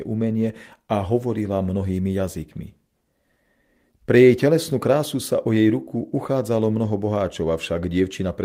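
No technical faults can be heard anywhere in the recording.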